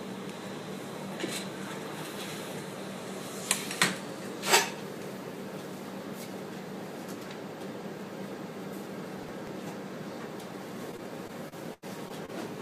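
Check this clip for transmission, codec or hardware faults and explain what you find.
Two faults turn up, both near the end.

Processor overload crackle, 9.18 to 9.47 s: around ten tiny buffers, each very short, miss their deadline and replay old audio, giving a quick gritty crackle.

Repeated packet loss (robotic sound), 10.91 to 12.30 s: seven gaps, about 200 ms missing, the longest 87 ms, are patched by stretching the last sound. The result is choppy and robotic.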